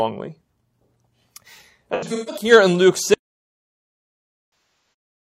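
From 1.94 to 2.51 s, AAC frame loss with concealment leaves smeared, phasey patches totalling about 300 ms, the longest around 150 ms. On a spectrogram, these appear as blurred, flattened harmonics. From 3.14 s to the end, an audio dropout to silence, likely from lost input, shows as a flat, silent waveform with no room tone. A second frame loss between 4.50 and 4.93 s falls within that silence.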